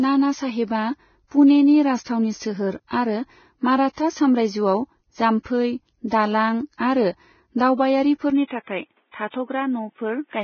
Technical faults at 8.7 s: Vorbis compression; input switched to a poorer device

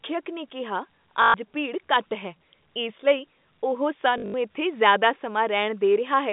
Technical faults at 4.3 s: packet loss with last packet repeated

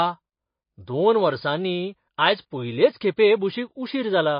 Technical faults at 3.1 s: MP3 compression

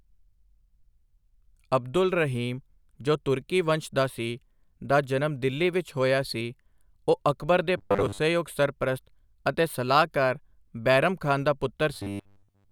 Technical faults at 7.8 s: robotic sound from repeated short buffers

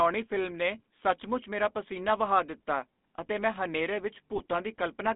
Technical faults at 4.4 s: GSM full-rate codec; GSM bit errors

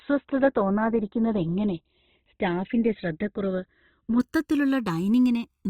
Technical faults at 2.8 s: channels drifting apart; adaptive stream starting at a low bitrate

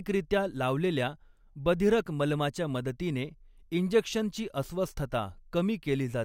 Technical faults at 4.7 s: none

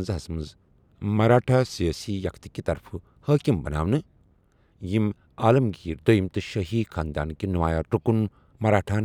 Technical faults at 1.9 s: drift correction step

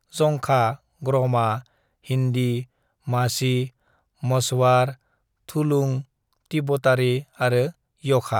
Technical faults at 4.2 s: none

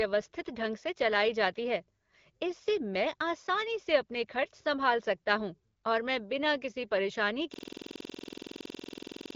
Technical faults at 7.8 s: system hang loop

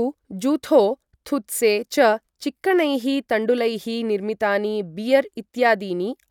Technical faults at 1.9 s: none

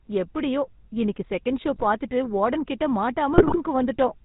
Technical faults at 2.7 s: GSM full-rate codec

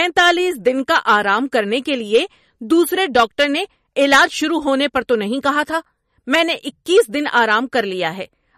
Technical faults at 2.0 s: MP3 compression

